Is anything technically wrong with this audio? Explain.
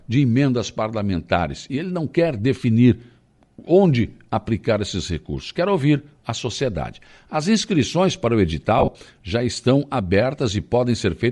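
Yes. Bluetooth LC3 compression runs throughout the speech. The upper spectrum sounds thinned and partly replaced by a grainy, breathy hiss, and the voice carries a breathy, grainy edge. This is likely the LE Audio transform codec working at a modest rate, consistent with 48 kbps and 10 ms frames. At that rate the encoder zeroes many high-frequency bins and the decoder fills them with noise instead of real detail.

Lost LE Audio frames occur from 8.79 to 8.95 s, between "inscrições para o" and "já estão". The losses are scattered across that 160 ms stretch and total 80 ms, which fits eight missing 10 ms frames. The longest single gap lasts a few tens of milliseconds. For each missing frame, the decoder repeated the previous spectrum with randomised signs, so the sound there turns into a brief noisy smear.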